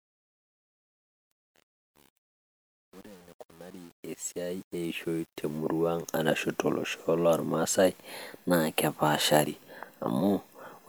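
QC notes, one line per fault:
0.00–5.58 s, truncation distortion on a fade: The fade-in starts gritty, worst from 0.00 to 5.53 s. The coarse square stepping fits an undithered 8-bit gain stage. The distortion ends at 5.58 s.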